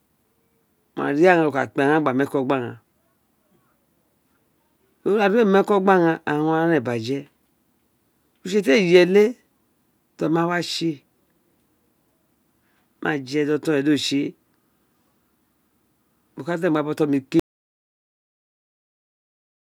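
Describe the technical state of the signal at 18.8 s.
At 18.8 s the signal is in an audio dropout to silence that runs from 17.40 s to the end of the clip. The speech cuts off abruptly into silence with no room tone, most likely because the input was lost while recording continued writing empty samples.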